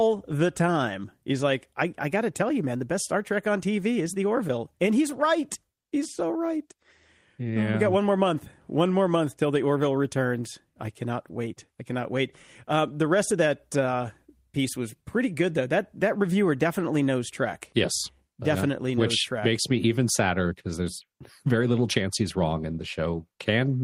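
Nothing stood out as a technical fault on listening to this speech recording.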